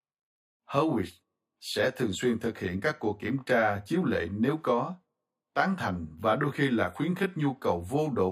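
Speech with channel delay (comb filtering) throughout: one side lags by around 20 ms before the mono sum, carving evenly spaced notches from around 20 Hz upward, so it sounds rough or slightly doubled.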